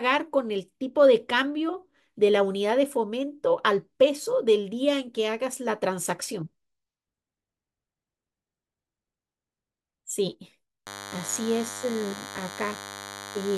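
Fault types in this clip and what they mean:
DECT cordless phone buzz: from 10.86 s to the end at 13.57 s, a thin, steady buzz sits under the speech, roughly 15 dB below it. A DECT handset or base station close to the equipment is transmitting short radio bursts 100 times a second. The audio circuitry rectifies that RF, turning each burst into a click, so the pulse train emerges as a 100 Hz tone rich in harmonics, giving the raspy, buzzy character heard here.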